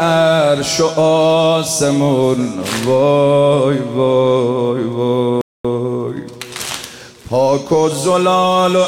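At 5.41 s the sound cuts out abruptly. Silence holds for about 234 ms, until 5.65 s, and the audio then resumes. This is a playback stall. The likely cause is the player running short of data, or its thread being blocked, leaving the output empty.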